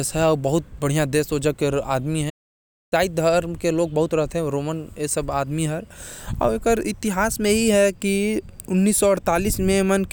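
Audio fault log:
2.29–2.93 s, playback stall: the speech cuts off mid-flow and the output falls completely silent for about 0.62 s before sound returns. The break is a dead gap rather than a fade or dropout noise, which points to the player no longer delivering samples at all, likely because its buffer ran dry or its playback thread was held up, so nothing reached the output until it recovered and resumed.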